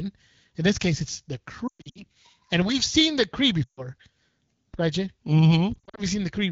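From 1.67 to 2.04 s the sound briefly smears and fades in patches, with the longest gap about 120 ms. This is lost AMR speech frames: corrupted frames were replaced by the decoder repeating its last good pitch and vocal-tract settings at falling gain. At 2.62 s a low thump marks a DC step, where the waveform's zero line jumps to a new offset. The sound over it continues unchanged, and the offset lasts until 4.74 s. Within that span, 3.64 to 3.86 s brings another quick drop toward near silence of about 140 ms. From 5.74 to 6.00 s, short dropouts of up to 40 ms give a warbling, choppy texture before the sound recovers. The AMR-WB coding at 12.65 kbit/s underneath stays clear.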